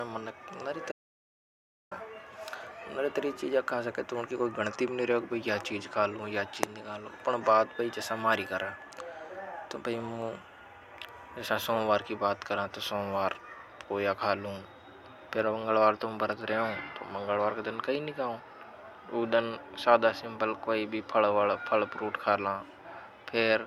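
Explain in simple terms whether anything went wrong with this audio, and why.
At 0.92 s the speech cuts off abruptly and returns at 1.91 s, leaving about one second of total silence. This is an audio dropout to silence, likely from the input briefly disconnecting. Unlike a natural pause, even the background hiss disappears.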